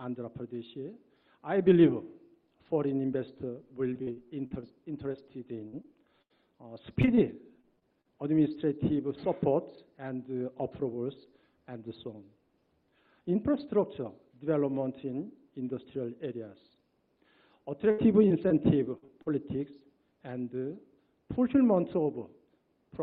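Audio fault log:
3.93–6.32 s: repeated packet loss (robotic sound). Short holes follow one another, each filled by extending the preceding sound, giving a choppy texture with pieces missing rather than one clean dropout.
7.02–8.07 s: repeated packet loss (robotic sound). Brief gaps of up to 35 ms recur in quick succession. The stretched fill makes it sound choppy rather than simply muted.
17.91–19.28 s: repeated packet loss (robotic sound). Gaps up to 71 ms are patched by continuing the last sound, so about 15% of the stretch is filled in instead of silent.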